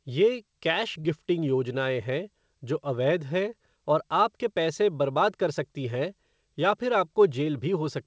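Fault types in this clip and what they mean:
Short concealed packet loss: about 30 ms of the call arrived too late for the decoder at 1.01 s, and the receiver patched the gap by extending the preceding speech and then crossfading back, leaving a brief smear in the speech that ends by 1.07 s, within a band that stops at 8 kHz.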